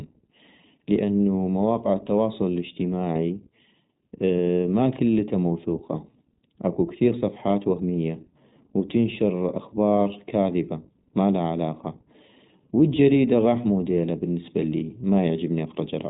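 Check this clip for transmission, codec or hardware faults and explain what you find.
Two faults run through the whole recording: comb filtering from a channel delay, and iLBC codec coding.

Channel delay (comb filtering), throughout: one channel reaches the mono sum a fraction of a millisecond later than the other, so content common to both cancels at evenly spaced frequencies. The first notch sits around 1.5 kHz, and further ones repeat higher up at fixed spacing. The speech sounds hollow and phasey, with a coloration that stays put regardless of what is said.

iLBC codec, throughout: the speech has been squeezed through a narrowband VoIP codec that codes the excitation of each frame independently, which fits 20 ms frames at about 15 kbps. Nothing above 3.8 kHz survives, so sibilants and breath lose their edge and the speech sounds boxed-in and telephone-like. The codec damage is plainly audible as a rough, slightly synthetic texture.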